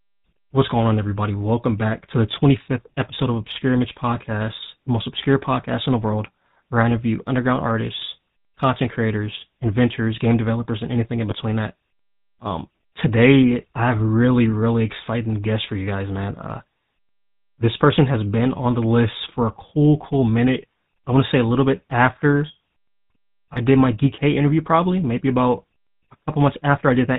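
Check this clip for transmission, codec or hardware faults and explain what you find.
Two faults are audible: GSM full-rate coding throughout, and two brief lost GSM frames.

The GSM full-rate codec colours the whole speech clip. It rebuilds the voice from a vocal-tract model driven by a coarse, regularly spaced pulse train, and nothing above 4 kHz survives. The result is a plainly audible buzzy, gravelly roughness, consistent with a 13 kbps stream. Unlike plain band-limiting, the grit sits inside the voice itself, not just in a dull top end.

Lost GSM frames occur at 11.30–11.34 s and 23.54–23.58 s, each about a 20 ms gap. The decoder covers each missing frame by reusing the last good frame's settings, so the sound briefly holds as a rough metallic ring instead of dropping out. This ringing, rather than a click or silent gap, distinguishes it from simple packet dropout.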